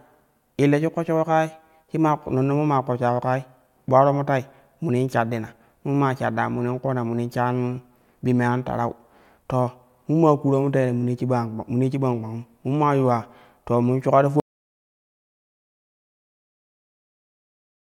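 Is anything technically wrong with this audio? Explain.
Yes. At 14.40 s, just after "to mun shuka ti", an audio dropout to silence cuts the speech mid-flow and lasts to the end. The input was likely lost while recording continued, so only silence follows, with no room tone: a flat waveform line and an empty spectrogram.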